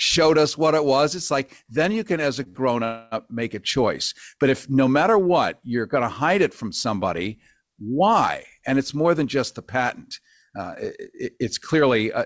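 From 1.73 to 2.57 s, packets arrived late repeatedly and the jitter buffer ran dry four times. The receiver stretched the last sound over about 94 ms in total, the longest gap 56 ms, so this speech stutters and drags with nothing lost. From 2.84 to 3.14 s comes a call audio freeze, likely from packets held up in transit. The receiver filled 272 ms by continuing the last sound as a fading buzz or hiss without falling silent, then resumed where it stopped. From 8.60 to 9.77 s, and again from 10.21 to 12.03 s, a jitter buffer speed-up shows. An overfull buffer had short pitch-period pieces trimmed out, roughly 70 ms each time. The audio runs at 105% and then 104% speed with pitch unchanged, the first stretch sounding hurried. Throughout, nothing sits above 8 kHz, which fits a G.722 call codec.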